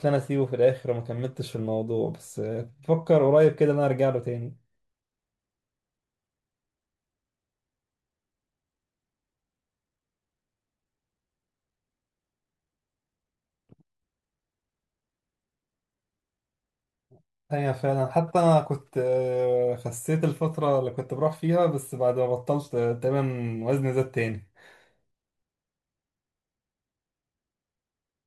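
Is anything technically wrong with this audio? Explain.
Yes. At 22.42 s the speech has a single sharp click, which is likely caused by dropped samples: a handful of samples, well under a millisecond, go missing, so the waveform steps abruptly to a later value. A spectrogram shows one thin vertical line there.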